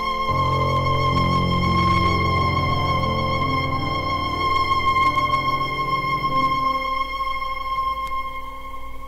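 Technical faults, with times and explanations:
Throughout, hard clipping: the level runs about 6 dB hotter than the chain can pass, so the biggest peaks get chopped flat, though it's only about 0.7 percent of samples. Those squared-off tops spray harmonics up high, giving a crackly edge on peaks.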